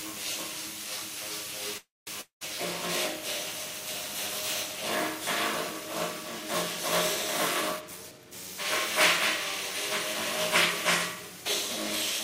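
A call audio freeze runs from 1.77 to 2.09 s, likely because packets stalled in transit and the jitter buffer emptied. The last sound stretches into a fading buzz, ending in about 0.2 s of near silence. The sound then resumes with nothing lost, about 0.3 s later than it should.

A long network dropout follows from 2.21 to 2.43 s, likely because audio stopped arriving altogether. Again a short fading buzz gives way to about 0.11 s of silence, and when sound returns, 200 ms of it has been skipped.

A jitter buffer speed-up spans 7.76 to 8.55 s. With surplus audio queued, the receiver trimmed many tiny pitch-period slices, roughly 0.15 s in total, to shrink the delay. The sound plays about 16% fast, hurried but unchanged in pitch.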